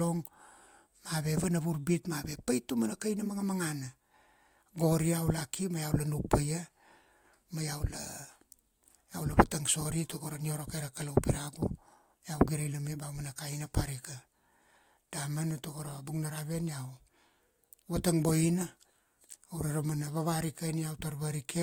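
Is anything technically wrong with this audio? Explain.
No, nothing is technically wrong with this audio.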